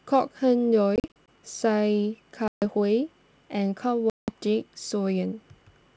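This speech clip has packet loss on an ADPCM call in three places. From 0.96 to 1.28 s, about seven packets totalling 140 ms are lost, scattered over 320 ms, none in a run longer than 40 ms. From 2.48 to 2.64 s, 140 ms drops out. From 4.10 to 4.32 s, 180 ms goes, roughly ten packets. Each hole is silent and hard-edged. The decoder's predictor and step size lose track of the sender's. Sound resumes with brief, slight distortion.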